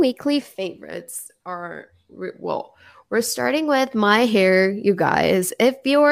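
It's a speech clip, and from 0.91 s to 3.37 s everything drops about 6.3% in speed and about 112 cents in pitch, a bit over a semitone, then snaps back just before "with my hair you". That sounds like a drift correction step: a clock-matching stage that likely changed the playback rate in one jump to refill its buffer, so speed and pitch sagged together until it stepped back.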